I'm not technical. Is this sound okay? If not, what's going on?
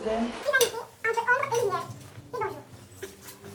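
No. From about 0.43 s to the end, the audio was recorded at one speed but played back at double that speed, with nothing in between to correct it. This fault is called wrong sample rate. Because the recording is run through twice as fast as it was made, everything goes by at 2 times normal speed and jumps a full octave higher in pitch, so the sound comes out rushed and squeaky.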